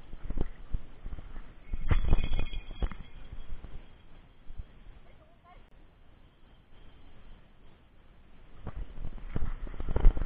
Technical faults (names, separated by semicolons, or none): gap at a join of encoded pieces